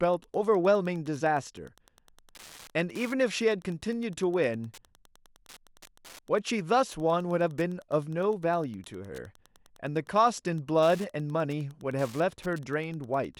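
From start to finish there's Wi-Fi interference riding under the speech: a steady ticking at roughly ten per second, sitting well below the talker, around 30 dB down. That rate lines up with a 102.4 ms beacon period, so a Wi-Fi radio parked close to the audio circuitry is getting its beacon pulses rectified and turned into audible clicks. It's faint but relentless.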